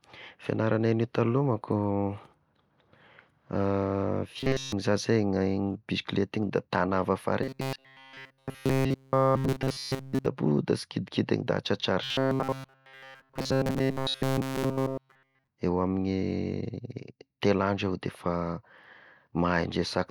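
Audio likely arrived too seldom, so playback looped a roughly 7.5 ms buffer. The result is robotic sound from repeated short buffers at 4.39–4.72 s, 7.43–10.26 s after "igny da tagnà avy", and 12.04–15.48 s. The speech there becomes a rigid, metallic 133 Hz buzz throughout.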